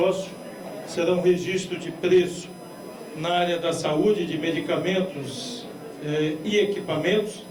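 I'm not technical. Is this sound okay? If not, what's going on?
No. A USB whine, a steady faint 1 kHz tone, runs through the whole clip, caused by the computer's USB connection leaking electrical noise into the audio.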